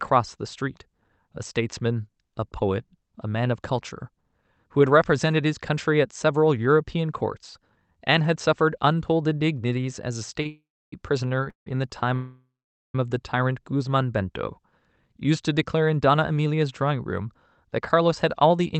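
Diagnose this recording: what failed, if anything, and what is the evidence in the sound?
Network delivery into the jitter buffer failed briefly three times: packets arrived late and the buffer ran dry. Each time, the receiver held the last bit of speech until the packet turned up, so the speech drags slightly with a faint buzzy smear. These short stalls from late packets occur at 10.42 s (27 ms), 11.28 s (24 ms) and 11.44 s (22 ms). Playback resumes exactly where it paused, so nothing is lost, only delayed.

Longer call audio freezes follow in the same stretch. From 10.48 to 10.93 s the speech halts for 443 ms, and about 300 ms of that is dead silence. From 11.50 to 11.67 s it halts for 163 ms, about 130 ms of it silent. From 12.14 to 12.95 s it halts for 799 ms, about 450 ms silent. Each pause starts with a decaying buzz and then goes quiet. The likely cause is packets held up in the network long enough to empty the jitter buffer. 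Speech resumes intact afterwards, so these are inserted gaps, not dropouts.

The jitter buffer speed-up comes after those delays. The buffer was left holding too much audio, so the receiver trimmed out short pitch-period slices to catch up. From 15.52 to 18.02 s the speech runs at 107% speed, shedding roughly a fifth of a second. From 18.42 to 18.75 s it runs at 111%, shedding a few tens of milliseconds. Pitch stays put, but the delivery sounds rushed. Through all of this the Opus call path keeps its 8 kHz bandwidth.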